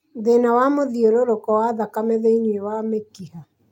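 No technical faults can be heard anywhere in the recording; the signal stays steady and intact throughout.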